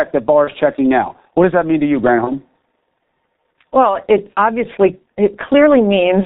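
From the very start the whole speech track carries the G.723.1 codec sound, and it's heavy: everything above 4 kHz is gone, so it's muffled, and the slow-updating voice model leaves a hoarse edge and smeared consonants. That coarseness fits the 6.3 kbit/s mode, with 30 ms frames being smoothed over.

At 0.45 to 0.50 s, just before "checking now", there's VoIP packet loss concealed by the speech codec. The decoder covered the gap by replaying its last pitch and filter at falling gain, so you hear a short, fading stretch. The gap sounds like about one 30 ms frame went missing, and the voice stays a bit weak and rough for a moment after.

The same thing happens at 2.24 to 2.32 s, right after "that mean to you": another brief smear, again about one frame's worth, with a short distorted tail as the decoder recovers.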